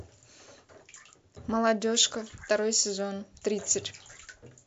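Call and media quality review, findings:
Watery, swirly speech, dull top end, metallic chirps on s sounds, smeared onsets throughout the clip. MP3 compression, likely cause, consistent with a bitrate around 64 kbps. Encoder starved of bits, treble cut and weak frequency lines flickering frame to frame, so damage is plainly audible.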